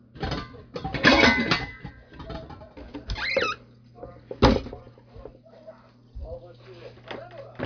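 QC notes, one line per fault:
No faults heard anywhere in this recording.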